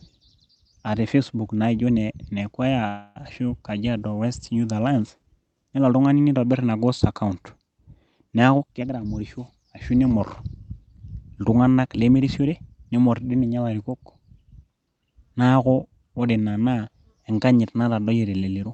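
At 2.87 s the speech stops moving forward for about 0.3 s (285 ms) and the last sound is stretched into a buzzy, fading tone before the talker picks up exactly where they left off. No silence falls and nothing is lost. This is a call audio freeze, likely caused by packets stalling so the jitter buffer ran dry. On a spectrogram the last harmonics smear into flat horizontal bands that thin out until 3.19 s. The waveform shows a decaying repetitive stretch with no flat-line gap.

From 8.54 s to 11.23 s the speech runs at about 110% of its normal rate while the pitch stays unchanged. It sounds rushed, as if the talker suddenly hurried. This is a jitter buffer speed-up. Having built up extra delay, the receiver trimmed tiny pitch-period slices, about a third of a second in total, to catch up. On a spectrogram the syllables and harmonic spacing look normal but sit closer together, and the waveform shows compressed syllable envelopes with no visible splice gaps. 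Throughout, the Opus call path cuts the spectrum off at 8 kHz.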